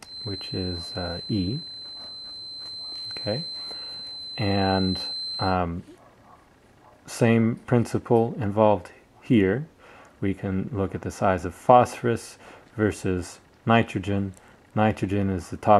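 From the start until about 5.59 s, a feedback whistle sits behind the sound: a thin, steady tone at 4.1 kHz, roughly 15 dB below the main signal, swelling and fading slowly in level. The likely cause is a loudspeaker-to-microphone loop held just short of runaway, so one frequency keeps ringing without becoming a howl. On a spectrogram it shows as a narrow horizontal line at 4.1 kHz; the waveform barely reveals it.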